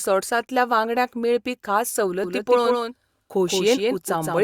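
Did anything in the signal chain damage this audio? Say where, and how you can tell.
Yes. From 2.24 s, after "वांगड्यांक मेळपी खास", to the end, a doubled audio track appears: a dry, full-band copy about 5 dB quieter trails by roughly 150 ms. Waveform and spectrogram repeat every onset at that gap, starting abruptly, likely from a slower second capture path.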